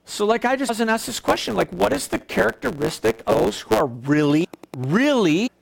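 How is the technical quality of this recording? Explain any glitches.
The recording has three kinds of technical fault, spread through the speech from about one second in.

Block size mismatch (truncated), 1.06 to 3.81 s: one processing stage writes longer blocks than the next reads, so the tail of each block is discarded. The result is a buzz at 109 Hz and speech running 1.09 times fast at roughly normal pitch.

Train of clicks, 4.30 to 5.05 s: about ten near-identical clicks at a regular 9.89 per second, peaking around 5 dB above the speech. They are heard as steady ticking, likely from electrical interference or a faulty connection.

Compressed frames skipped, at 4.44 s and 5.46 to 5.48 s: the decoder skipped whole compressed frames, around fifteen of 21.3 ms each. At each point the speech jumps ahead by roughly 300 ms.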